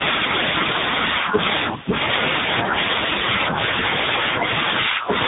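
From start to finish the speech sounds rough, muffled and warbly, with nothing above about 3.8 kHz. This is tandem speech coding. The signal passed through AMR-NB at 6.7 kbit/s, then G.711 A-law at 64 kbit/s, then G.726 at 32 kbit/s. That means two lossy speech coders in a row, and the second one had to work on audio the first had already degraded. Their errors compound into a harsher, duller result than either coder would produce alone.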